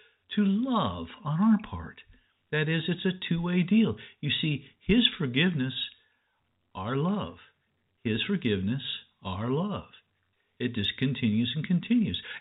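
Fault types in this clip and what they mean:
Nothing stood out on listening to this speech, which carries the narrow band of an ordinary telephone line.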